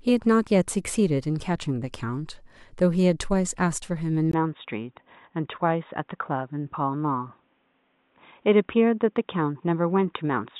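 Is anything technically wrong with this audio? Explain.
Yes. From 4.32 s to the end, the speech turns dull and boxy after a 20 ms gap, with nothing above 3.8 kHz, unchanged loudness and a faint new background noise well below the voice. This is likely an input switched to a poorer device, a narrower-band microphone or headset call profile.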